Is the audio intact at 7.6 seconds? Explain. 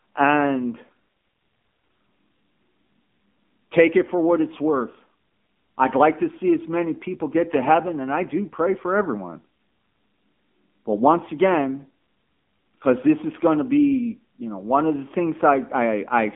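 No. From 7.53 to 7.70 s, between "as many people get" and "and I do pray", there is loose connector crackle. A worn or dirty contact is making and breaking many times within that fraction of a second, so the signal is chopped on and off. It sounds like an irregular burst of scratchy crackle. Unlike a single dropout or one click, it is a ragged cluster of tiny interruptions with no regular spacing.

That moment also carries the AMR narrowband mobile codec damage heard across the whole speech clip. The band is squeezed to roughly 200 Hz to 3.5 kHz with nothing above 3.6 kHz, giving a thin telephone tone. The low-rate vocal-tract model, which fits a mode around 7.4 kbps, adds a plainly audible buzzy, synthetic edge. Plain band-limiting alone would sound muffled but clean, without that artificial rasp.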